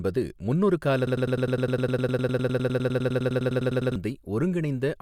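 At 1.07 s the speech falls into a broken-record loop. A 102 ms fragment repeats exactly, 28 times, until 3.96 s. It sounds like a fast mechanical stutter. The likely cause is a stalled player or stream resending its last fragment. The speech meant for that span is lost.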